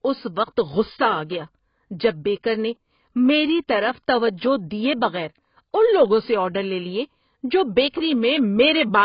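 Speech with AAC compression damage running from start to finish. Nothing remains above about 5.1 kHz, so the sound is dull and sibilants lose their edge. Heavy coding damage leaves smeared, warbling textures on sustained sounds and a fizzy grain on consonants, which points to AAC-LC at a very low bitrate, around 16 kbps. The likely cause is the encoder cutting the bandwidth and coarsely quantising, or emptying, spectral bands to stay within its bit budget.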